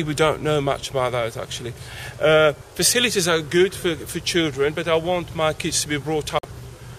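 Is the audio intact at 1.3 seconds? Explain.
Yes, the audio at 1.3 seconds is intact, with no dropout, click, distortion or other fault.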